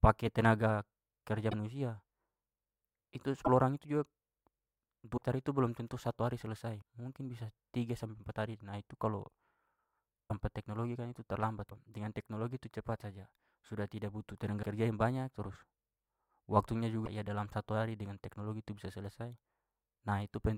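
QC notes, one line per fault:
1.50–1.53, 3.44–3.48 (before "orang itu"), 5.16–5.19, 10.28–10.31, 11.69–11.72 (between "teknologi kan itu terlambat" and "dengan teknologi tu"), 14.62–14.64, 17.05–17.07 s, broken MP3 bit reservoir: the speech jumps ahead with a brief chirp or hole. Each lasts about 26–44 ms, with 26 ms MP3 frames, likely where a frame's reservoir reference pulled in bytes from another frame.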